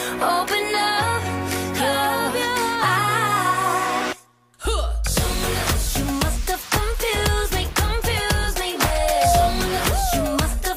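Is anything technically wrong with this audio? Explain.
Yes. There is loudspeaker feedback squeal from about 8.67 s to 9.65 s. A microphone is picking up the loudspeaker it feeds. At one frequency, 694 Hz, the loop gain goes above one. That tone feeds on itself and grows. It swells over roughly half a second into a steady squeal. It ends up about 5 dB louder than the rest of the audio before it stops at 9.65 s.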